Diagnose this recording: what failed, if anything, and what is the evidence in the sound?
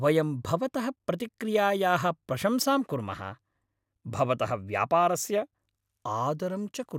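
Nothing in this recording stood out as a problem on listening.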